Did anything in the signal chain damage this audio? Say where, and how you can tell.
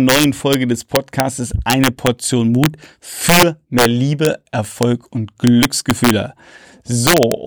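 Yes. A fixed-point gain stage, most plausibly during sample-format conversion, pushed this speech about 6 dB past full scale, and integer overflow wrapped those peaks to the opposite sign instead of limiting them. Throughout the clip, around half a percent of samples flip, giving sharp, violent cracks on the loudest syllables, harsher than clipping.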